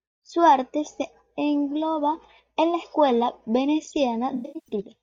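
From 4.31 to 4.74 s, AAC frame loss with concealment leaves scattered smeared, phasey patches rebuilt from earlier spectrum, not silent gaps, the longest roughly 0.1 s.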